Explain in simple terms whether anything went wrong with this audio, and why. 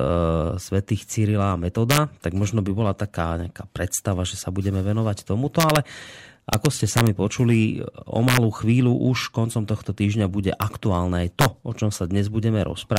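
Integer overflow cracks break through the speech at 1.91–1.98, 5.60–5.76, 6.53–7.07, 8.29–8.37, 10.62, 11.41–11.45 and 12.97 s. Loud peaks exceeded the largest storable number and wrapped to the opposite extreme instead of being limited, producing harsh snaps.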